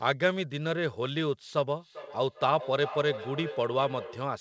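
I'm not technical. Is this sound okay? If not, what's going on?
No. From about 1.78 seconds to the end there is feedback echo between two devices: two devices in one room share the call, so one device's microphone picks up the other's loudspeaker. Unlike ordinary room echo, each phrase returns at a steady spacing of roughly 0.4 seconds, thinner and more ringing each time.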